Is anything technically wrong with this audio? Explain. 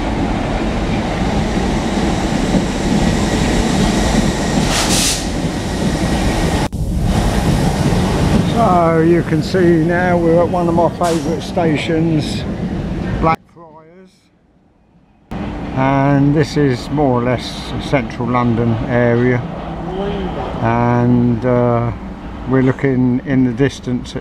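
Yes. From 13.35 to 15.31 s the audio almost disappears, falling by about 26 dB, background included, and then returns at its normal level. The likely cause is one channel inverted: one stereo channel carried reversed polarity, so when the two were summed to mono, everything common to both cancelled. What survives during that stretch is only the small difference between the channels, a quiet remnant of the original sound.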